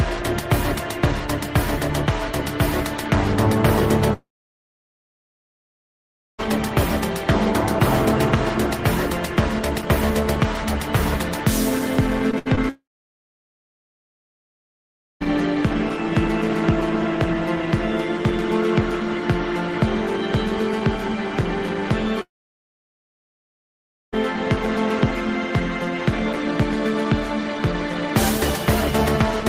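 From 4.13 to 6.40 s, a long network dropout likely stopped the stream. About 2.3 s of audio is lost: a brief fading continuation, then roughly 2.15 s of silence before sound resumes.

From 12.31 to 12.59 s, repeated packet loss leaves three gaps, the longest 68 ms, covering about a third of the span. Patching them makes the sound choppy.

Another long network dropout follows from 12.69 to 15.22 s, about 2.5 s lost, mostly silent.

A third long network dropout runs from 22.22 to 24.14 s, about 1.9 s gone, with roughly 1.85 s of silence before the audio returns.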